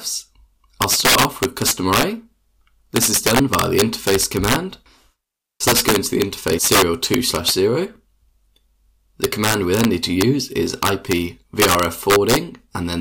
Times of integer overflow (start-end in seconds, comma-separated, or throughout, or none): 0.82-2.03, 2.96-4.56, 5.68-7.51, 9.24-9.85, 10.21, 10.83-11.13, 11.60-12.36